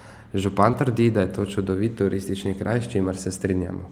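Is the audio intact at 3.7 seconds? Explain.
Yes, the speech at 3.7 seconds comes through intact, with no fault at that moment.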